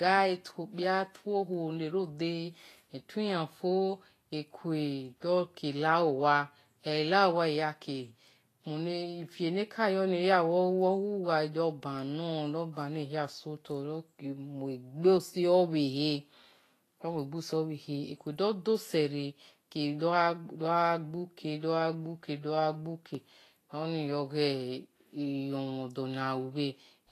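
Across this whole speech clip the treble sounds hissy and grainy, consonant attacks are smeared, and nothing is heard above 14.2 kHz. That points to Vorbis compression, likely at a low bitrate near 33 kbps, quantising high-frequency detail so coarsely it turns into noise.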